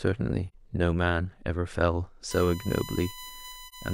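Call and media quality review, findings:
AAC frame loss with muting, 0.48–0.54 s and 3.65–3.74 s. Short soft-edged dropouts in the speech. Decoder zeroed the missing frame's spectrum, and overlap-add tapers in and out around it. Each gap fits one lost frame of about 43 ms. Spectrogram: thin full-band vertical blank with blurred edges. Waveform: envelope fades to silence and back rather than cutting hard.

USB whine, 2.31 s to end. Fixed-pitch 1 kHz tone, strongest at 1 kHz, roughly 15 dB below the speech. USB 1 ms frame current leaking into the audio path via power or ground. Spectrogram: horizontal line at 1 kHz from 2.31 s on. Waveform: raised noise floor in pauses.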